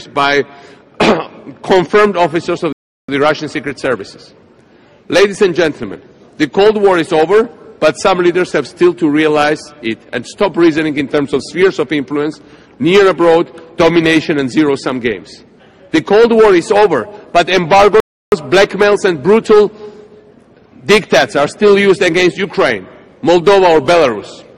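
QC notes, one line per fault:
2.73 to 3.09 s and 18.00 to 18.32 s, playback stall: the sound cuts out mid-flow into silence for 0.36 s, then again for 0.32 s, and each time resumes after the gap. This is likely the player running out of buffered data or having its output thread blocked, so nothing reaches the output until it recovers. The abrupt dropout, with no fade or repeated material, gives the audible hole.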